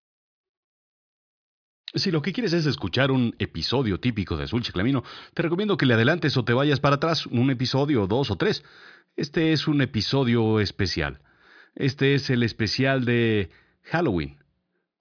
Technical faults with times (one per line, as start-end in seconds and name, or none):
none